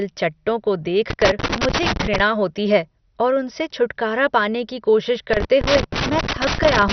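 Throughout the speech, the top end is missing: nothing is present above 6.2 kHz, and what remains has a dull, gurgling, granular texture with upper detail flickering in and out. This is heavy MP2 compression damage, likely from encoding at a low rate around 48 kbps. Layer II divides the spectrum into 32 sub-bands and shares out a bit budget; starved of bits, it shuts off the upper bands entirely and quantises the surviving ones coarsely.

From 1.10 s to 2.20 s, and again from 5.33 s through to the end, a loose connector crackle breaks in as an irregular burst of scratching. A worn or dirty contact is rapidly making and breaking, chopping the signal on and off. The result is a rough, uneven crackle layered over the speech for the duration of each burst.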